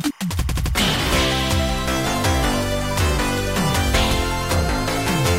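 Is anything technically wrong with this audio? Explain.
Yes. Timecode bleed runs from 0.0 to 2.0 s: 25-frame linear timecode leaking from an adjacent line chirps between about 1 and 2 kHz, roughly 30 dB under the sound.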